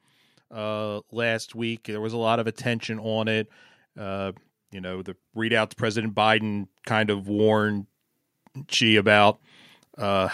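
From 0.48 s to 7.84 s the whole speech clip swells steadily louder, and the background rises right along with the voice rather than staying put beneath it. By the end of that stretch the level has climbed by about 14 dB. This is automatic gain rising: the automatic gain control judged the input too quiet and kept turning its gain up slowly over those seven-odd seconds, lifting everything in the signal together.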